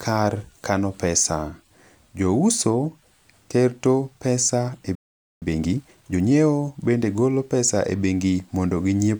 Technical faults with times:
4.95-5.42 playback stall
5.42-6.34 time-compressed catch-up

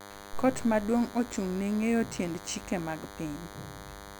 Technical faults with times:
0.00-4.20 DECT cordless phone buzz

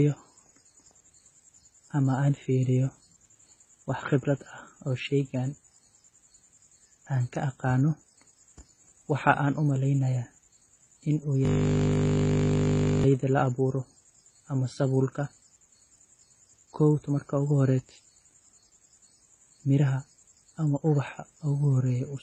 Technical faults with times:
0.00-22.23 transcoding between lossy codecs
11.45-13.04 system hang loop

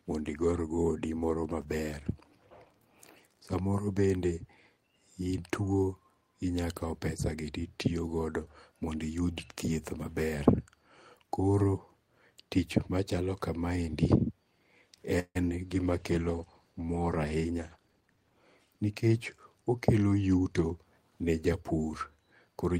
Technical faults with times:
15.19-15.37 call audio freeze
15.49-15.52 short concealed packet loss
15.69-18.84 call bitrate drop
17.36-18.66 jitter buffer speed-up

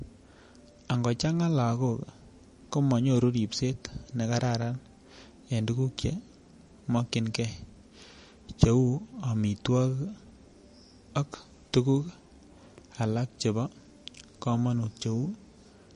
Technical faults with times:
0.00-15.95 MP3 compression

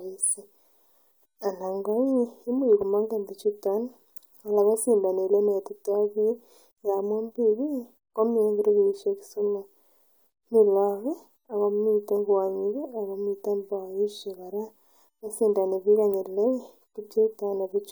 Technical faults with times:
none

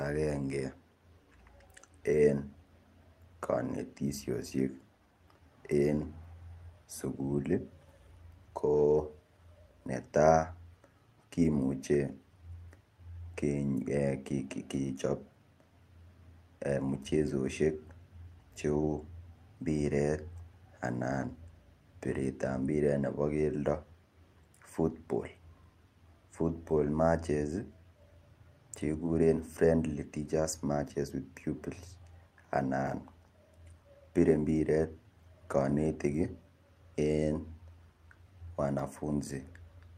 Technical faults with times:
none

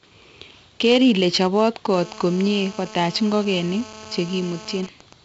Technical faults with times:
0.00-5.25 4-bit ADPCM compression
1.94-4.81 GSM phone buzz
4.83-5.13 GSM signalling bursts

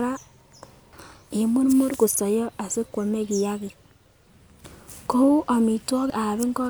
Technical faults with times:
6.10 audio missing between chunks

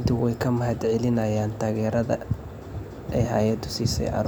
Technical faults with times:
none

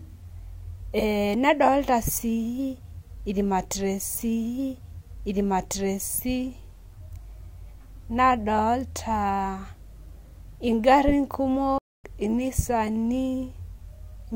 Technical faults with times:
4.14-6.14 stream segment repeated
11.78-12.04 playback stall

